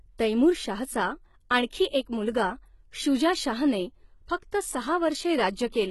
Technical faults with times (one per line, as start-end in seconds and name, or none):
0.00-5.90 HE-AAC compression
1.70-1.72 pre-echo
4.51 pre-echo